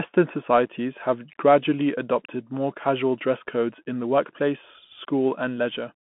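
A speech clip, heard throughout as thin, boxed-in telephone sound with a grainy hiss riding under it and sibilants that come out scratchy. Nothing above roughly 3.4 kHz survives, and little below about 150 Hz, and the damage is plainly audible. That combination points to the Bluetooth CVSD headset codec, a narrowband link at what sounds like 64 kbps. CVSD encodes each sample as a single up-or-down step whose size adapts. When the signal moves faster than the step can follow, the waveform lags and distorts, and the constant stepping leaves a granular noise floor. At 0.66 s, just before "have gradually adopted more", there is a sudden tiny hole of about 7.5 ms with hard edges, followed by a brief drop in level as the sound resumes. This is unconcealed Bluetooth headset packet loss, probably a single voice packet that never arrived between headset and phone. With no concealment, silence or an idle pattern filled the gap, and the CVSD decoder's adaptive step had to recover, which gives the momentary quietness afterward.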